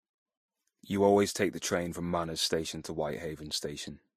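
Throughout the speech, the artefacts of different codecs sit together, likely from transcoding between lossy codecs such as MP3 then Vorbis; spectrograms show nothing above 15.3 kHz.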